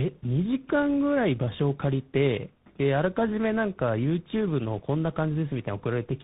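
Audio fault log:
Throughout: tandem speech coding. Speech sounds re-coded three times in a row, likely GSM, ADPCM, then CVSD, each adding roughness, with nothing above 3.8 kHz.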